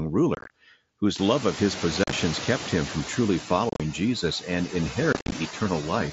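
Speech recorded over a wideband mSBC headset link runs with background noise that is processed by a suppressor throughout. These are noise suppressor artifacts: the suppressor judges, frame by frame, which frequency bands hold steady noise and pulls them down by about 15 dB, so the noise floor dips between phrases and lifts under the voice. Around 1 s the room noise jumps by roughly 22 dB, and from 1.18 to 3.25 s it comes through much louder, cut by only about 4 dB, before sinking back over those two seconds. That is the noise suppressor catching up: its noise estimate was tuned to the quieter room, so it takes about 2.1 s to relearn the new level and restore full reduction. Four bursts of rough, chopped, crackly breakup fall at 0.35 to 0.50 s, 2.04 to 2.13 s, 3.69 to 3.80 s and 5.13 to 5.32 s, each made of short hard-edged gaps. These are unconcealed Bluetooth headset packet loss: voice packets between headset and phone went missing and nothing filled them. 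The lost audio comes to 90, 67.5, 90 and 127.5 ms, scattered across each span, with the longest single holes reaching 22.5, 37.5, 37.5 and 52.5 ms.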